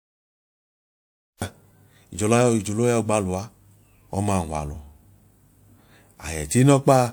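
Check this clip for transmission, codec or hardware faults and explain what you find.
One fault stands out, a cut-off start. From 0 to 1.42 s there is dead digital silence, then the speech bursts in mid-sound with no attack, because capture began late.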